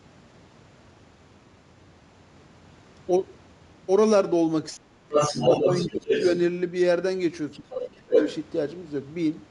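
Speech suppressed in double talk, 4.70 to 5.44 s: the talker's speech sinks by roughly 30 dB and breaks up for most of that stretch. The likely cause is an echo canceller that, with both ends talking at once, could not tell the near talker from the loudspeaker echo and turned everything down. Other side's voice leaking through, 5.12 to 6.38 s: a second voice comes through at about the same level as the talker, most likely because the canceller failed to subtract the far end played on the loudspeaker. Inside that stretch, from 5.91 to 6.10 s, the talker dips again by roughly 25 dB. A fainter leak, about 10 dB under the speech, follows from 7.53 to 7.88 s. Speech is suppressed again, by roughly 25 dB, from 7.59 to 8.16 s. From 8.16 to 8.34 s the leaked voice briefly rises above the talker, by about 5 dB, within a band that stops at 8 kHz.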